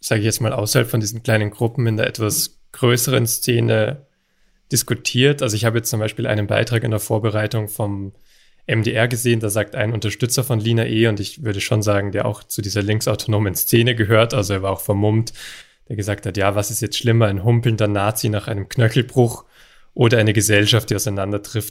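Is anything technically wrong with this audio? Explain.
No, nothing technically wrong can be heard in this speech recording. It shows no faults at any point.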